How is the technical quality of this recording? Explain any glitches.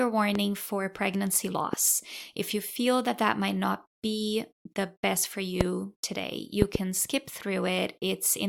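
The speech is interrupted by five loud pops. Single pops strike at 0.35 s just before "for pregnancy", at 1.73 s just after "for pregnancy", and at 5.61 s after "be the best for", and a double pop spans 6.62 to 6.77 s. They stand roughly 15 to 20 dB above the speech, which continues underneath. A voltage spike from a switch, plug or static likely entered the chain. On a waveform each shows as a tall, narrow spike, and on a spectrogram as a thin vertical stripe across all frequencies.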